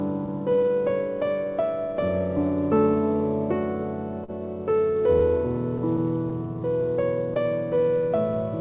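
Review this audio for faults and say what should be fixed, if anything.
Clock drift between sender and receiver runs through the whole clip. The sending clock runs about 4 percent slow relative to the receiver's, so the jitter buffer keeps draining. To stay in step, the receiver has to keep lengthening the stream by small amounts. The result is a faint, irregular unsteadiness in tempo rather than any single obvious break, beneath the narrow band of the G.711 A-law call path, which carries nothing above 4 kHz. Prevent it with receiver-side clock-skew compensation that resamples smoothly instead of inserting time in chunks.

Repeated timing corrections occur from 0.50 s to 8.10 s. Across this span the receiver stretches playback so the sound runs at 97 percent speed, adding roughly a fifth of a second in total. The insertions all go the same way and fall at uneven intervals, each too small to stand out alone. 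Prevent them by correcting the drift continuously with fine-grained resampling rather than discrete repeats.

A short stall from a late packet occurs at 4.24 s to 4.30 s. One packet missed its playout time and the jitter buffer ran empty. The receiver held the last sound for 42 ms until the packet arrived, then resumed from the same point. Nothing is lost, but that moment is drawn out with a slight buzz or dip, and playout delay rises by 42 ms afterwards. Prevent it with a slightly deeper adaptive jitter buffer that keeps a margin when the sender runs slow.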